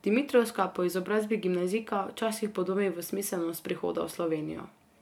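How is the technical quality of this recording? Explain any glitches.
No glitches are audible, so there is nothing to explain about the technical quality of this recording.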